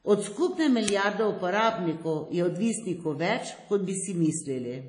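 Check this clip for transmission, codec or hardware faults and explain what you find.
Two faults are audible: a compression artefact across the whole speech clip, and one brief digital burst.

WMA compression, throughout: the sound is ringing and washy, with hiss that swells and fades with the speech and nothing above about 10.1 kHz. The likely cause is a WMA-style transform codec at a low bitrate, around 32 kbps, smearing quantisation noise over long blocks and discarding weak high detail.

Uninitialised buffer, at 0.88 s: a sharp, loud crack of digital noise lasting about 5.3 ms, which fits a 256-sample block. The buffer was played before any audio had been written into it, so stale memory contents came out as raw samples.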